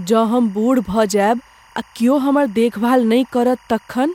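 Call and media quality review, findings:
Timecode bleed, whole clip. Faint chirping warble behind the speech, about 35 dB down. Square-wave code near 1 and 2 kHz, likely leaking from an adjacent track. Pattern fits 23.976 fps timecode.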